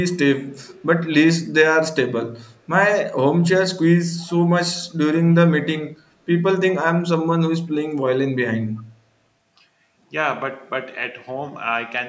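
Echo leak appears at 0.07 to 0.18 s, 0.43 to 0.81 s and 4.23 to 4.35 s as a faint, delayed copy of speech trailing 375 ms behind the original. The first two scraps are barely audible, far below the speech, and the third is weak but clearer. This is likely a far-end loudspeaker whose echo canceller missed part of what its microphone picked up, so the residue was sent back down the line.

Speech suppressed in double talk follows at 4.72 to 4.84 s and 5.62 to 5.82 s. The talker's level dips briefly, by about 10 dB in the first spot and about 15 dB in the second, for a tenth of a second or less each time, leaving a short hollow or clipped patch. The likely cause is that both sides spoke at once and the echo canceller, unable to separate the local voice from the loudspeaker echo, pulled both down together.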